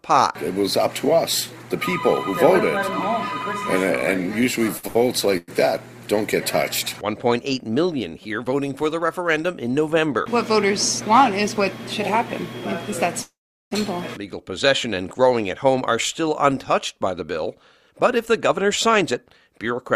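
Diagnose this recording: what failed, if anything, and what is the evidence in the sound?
The failure is at the network stage, with the receiver's jitter buffer concealing late packets. Two short stalls from late packets fall close together, at 4.77 to 4.85 s and 4.87 to 4.97 s. In each, the sound is held unnaturally long, with a slight buzzy sustain, for about 57 ms and then 80 ms. The buffer ran dry, the receiver stretched the last audio until the packet arrived, and playback resumed at the same point. Nothing is lost, but the delay grows by each stretch.

Two call audio freezes follow. At 5.37 to 5.50 s the last sound is carried on for about 105 ms as a fading buzz that never reaches silence. At 13.22 to 13.73 s the fill lasts about 495 ms, and roughly 380 ms of it has decayed to silence before the audio picks up where it stopped. The likely cause is packets held up in transit, emptying the jitter buffer, with the receiver extrapolating and then fading while it waited.

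From 17.24 to 19.78 s there is a jitter buffer speed-up. The audio runs about 4% fast at unchanged pitch. The receiver was draining excess buffered audio, trimming short pitch-period-sized segments repeatedly. About a tenth of a second was removed in total, which pulls the latency back toward its target.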